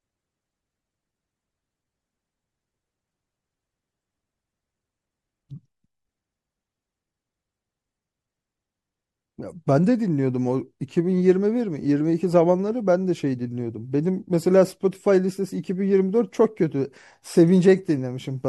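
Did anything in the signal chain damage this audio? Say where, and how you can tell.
Yes. Throughout the speech there is a watery, swirling quality, with the top end dulled and s sounds breaking into metallic chirps, and consonant onsets smeared rather than crisp. This points to the codec stage, likely MP3 compression at a low rate, which fits something around 64 kbps. Short of bits, the encoder cuts the treble at a fixed frequency and drops quiet frequency lines, so detail flickers in and out from frame to frame.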